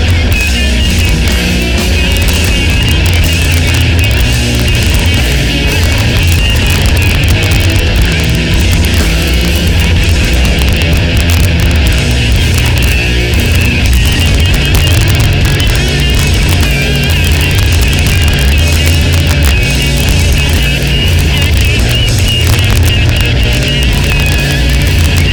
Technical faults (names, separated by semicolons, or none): integer overflow